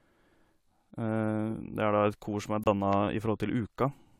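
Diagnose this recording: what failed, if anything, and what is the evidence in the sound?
Corrupt frame muted at 2.64 to 2.67 s, just after "som er": the speech drops abruptly into silence for about 37 ms, consistent with two compressed frames failing decoding. The codec decoder discarded them and the player filled their slot with silence, keeping timing intact.

Loud pop at 2.93 to 2.95 s: a single sharp transient sits roughly 10 dB above the speech while the talking continues underneath. This points to the analogue wiring or driver stage, likely a voltage step from a switch, plug or static discharge.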